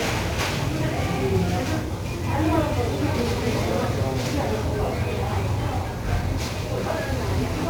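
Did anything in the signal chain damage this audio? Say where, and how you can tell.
Yes, at the codec stage: heavy 1-bit DFPWM compression runs through the whole clip. Every part of the audio sits under a dense, fuzzy crackle, and the treble is buried in broadband hiss. That points to a one-bit-per-sample coder at roughly 48 kbps, whose adaptive step keeps overshooting as it chases the waveform. Unlike a perceptual codec's warbly, band-limited artefacts, the noise here is evenly spread and never drops out.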